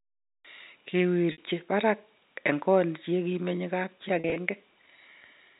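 At 1.32 to 1.38 s there is a packet loss with pitch repetition: about 60 ms of audio went missing, consistent with three 20 ms packets, and the receiver bridged it by looping the last pitch period, heard as a brief held, buzzy tone. At 4.20 to 4.36 s the loss is scattered, 80 ms spread over 160 ms with no gap longer than 40 ms, giving a stuttering run of short buzzy repeats. Throughout, the G.711 telephone band caps content below 4 kHz.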